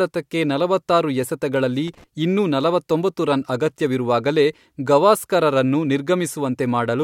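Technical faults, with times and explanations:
1.88 to 2.04 s, loose connector crackle: a worn or dirty contact somewhere in the signal path shifted and began making and breaking the circuit in rapid, uneven succession for about 0.16 s. Each break chops the speech signal, and any DC sitting on the line jumps at every reconnection, so the interruptions come out as clicks and pops. Together they form a short, irregular burst of scratchy crackle laid over the speech.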